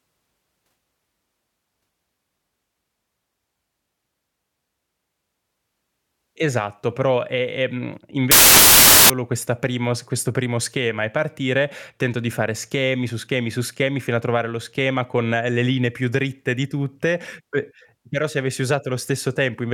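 Samples built from the wrong bytes, from 8.31 to 9.10 s, just before "questa primo questo primo". For about 0.8 s the speech is replaced by a burst of loud, harsh broadband noise. The bytes of each sample are assembled wrongly, swapped or shifted by one, so the rapidly fluctuating low-order bits land in the most significant position.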